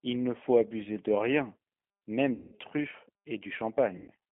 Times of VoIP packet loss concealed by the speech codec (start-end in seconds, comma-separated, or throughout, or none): 2.34-2.55, 3.98-4.12